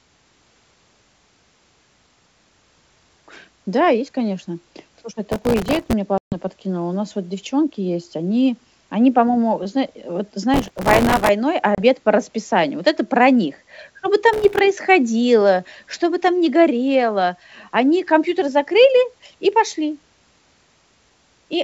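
From 5.32 to 5.93 s a processor overload crackle tears through the speech: the processor misses dozens of buffer deadlines in a row, each gap filled with a snippet of old audio with hard edges. The tiny repeats, spaced so closely they suggest buffers of well under 2 ms, merge into a gritty rasp. On a spectrogram it shows as a dense smear of vertical broadband streaks. The waveform looks jagged, with discontinuities at every splice.

At 6.18 s a packet loss on an ADPCM call cuts a 140 ms hole. On the waveform it is a flat, hard-edged gap; on the spectrogram it is a blank column across all frequencies. When the sound returns, the decoder's predictor and step size have drifted from the sender's. The speech comes back slightly distorted, then settles within tens of milliseconds.

The crackle returns after "зна э вот" from 10.54 to 11.29 s, its longest run, with about a hundred missed buffers.

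A shorter 30 ms ADPCM dropout at 11.75 s falls just before "по расписанию" and leaves a narrow gap and a brief distorted recovery.

A final crackle burst runs from 14.33 to 14.59 s. Throughout, the wideband G.722 coding keeps speech clear up to about 7 kHz with a faint upper-band hiss, consistent with its full 64 kbit/s mode.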